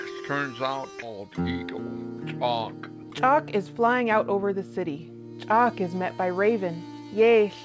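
A skip ahead occurs at 1.02 to 1.04 s: roughly a second of audio never reaches playback, either lost on the way or discarded when an overfull jitter buffer already had later audio queued. With nothing inserted to cover the gap, the sound jumps straight from what came before to what came about a second later, and the two edges are butted together with no pause, leaving an abrupt, unnatural join and an audibly missing stretch.

From 3.03 to 4.43 s a jitter buffer speed-up follows. The buffer was holding more audio than its target, so the receiver trimmed it back by cutting out many short slices, each one or a few pitch periods long, in quick succession, about a tenth of a second in total. The result plays at about 106% speed with the pitch unchanged, so this stretch sounds slightly rushed. The G.722 call path at 64 kbps, with nothing above 8 kHz, sets the bandwidth throughout.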